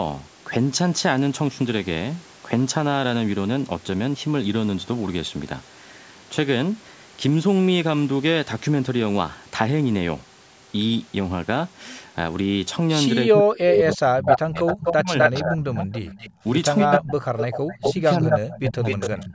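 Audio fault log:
13.26–15.89 s, 16.85–17.24 s, 17.78–19.34 s: speech suppressed in double talk. The talker dips hard, by about 30, 40 and 25 dB at worst, over roughly two seconds, a third of a second and a second. Likely the echo canceller couldn't separate the talker from loudspeaker echo while both sides spoke, so it turned everything down.
14.27–15.57 s, 15.92–16.33 s, 16.77–17.0 s, 17.37–19.24 s: echo leak. A copy of the voice comes back 252 ms late, from about 20 dB under the speech up to about 5 dB above it. Likely the loudspeaker echo wasn't fully cancelled and got sent back.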